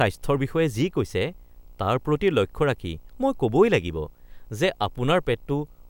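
From start to finish the speech carries video or display buzz: interference from a screen or video cable coupling into the audio path. It sits at the picture's field rate of 59.94 Hz, giving a harsh, harmonically rich buzz with hash layered above it, plus a thin whine at the 15.7 kHz line rate. The interference sits roughly 40 dB below the speech, so it is most noticeable in pauses.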